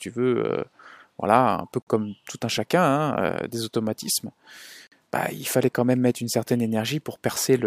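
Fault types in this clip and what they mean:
Gap between chunks: at 1.82–1.87 s and again at 4.87–4.92 s the speech drops into a hole of about 48 ms. The two holes sit exactly 3 s of audio apart, which fits the sound being delivered in 3-second blocks with silence added at each join. Nothing is missing from the speech itself. Each block is simply pushed later, so the flow breaks cleanly at every boundary.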